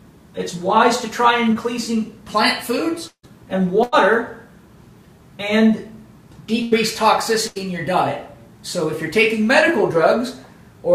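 At 1.53 to 1.57 s, a short concealed packet loss replaces about 20 ms with extrapolated sound, heard as a brief smear; the spectrogram shows a slightly blurred column.

From 3.07 to 3.25 s, the sound turns into a fading buzz or hiss, then about 80 ms of near-silence, and resumes with about 160 ms missing. This is likely a long network dropout. The waveform shows a decaying tail, then a flat stretch.

Bursts of packet loss occur at 3.83 to 3.94 s, 6.62 to 6.73 s and 7.47 to 7.57 s, each dropping 80 to 100 ms. Each is heard as a held, fading buzz or hiss, with smeared, dimming harmonics on the spectrogram.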